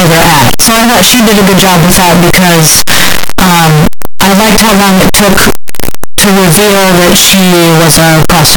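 Speech, and from start to finish it is buried under very loud, harsh distortion, with soft sounds coming through as loud as strong ones. That points to signed and unsigned samples being mixed up. The likely cause is 8-bit signed data read as unsigned or the reverse, which flips the top bit so that every zero crossing swings across the full range.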